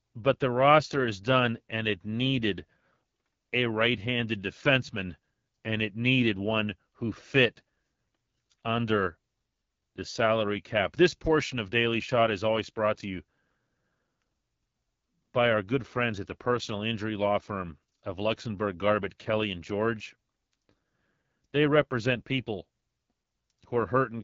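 Speech throughout shows AMR wideband (HD Voice) codec damage: raspy, rough voicing with a noise-filled top band ending near 7.5 kHz, unlike narrowband's 3.4 kHz ceiling, pointing to roughly 8.85 kbit/s.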